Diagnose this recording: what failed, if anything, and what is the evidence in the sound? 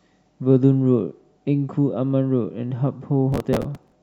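A gritty burst of crackle tears through the speech from 3.33 to 3.92 s, then stops. This is processor overload crackle at the driver or buffer stage. The processor missed dozens of deadlines again and again, and each missed buffer was skipped, leaving a hard-edged gap. The gap lengths fit buffers of around 3 ms.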